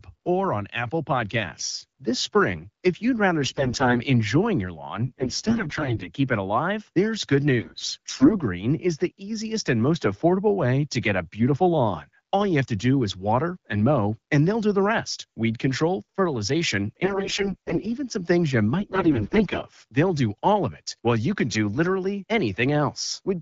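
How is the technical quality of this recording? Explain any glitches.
The speech carries five bursts of AMR bit errors, at 3.43–3.99 s, 5.06–6.09 s, 7.60–8.37 s, 17.03–17.85 s and 18.80–19.63 s, each lasting roughly half a second to a second. On a poor radio link, many of the weakly protected bits in each codec frame were flipped, up to around 30% in the worst burst, while the check on the critical bits still passed. The decoder therefore accepted the damaged frames. Misplaced excitation pulses and wrong pitch, gain and spectral values make the voice turn hoarse, scratchy and gargly, although its pitch and loudness stay roughly intact. The underlying AMR wideband (HD Voice) coding is clear outside these bursts, which fits a rate around 12.65 kbit/s.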